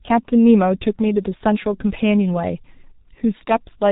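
Right from the start and all the way through, the speech carries heavy G.723.1 codec damage. Nothing comes through above 4 kHz, the slow-updating voice model and long 30 ms frames smear consonants together, and the result sounds muffled and hoarse, which fits a rate around 6 kbit/s.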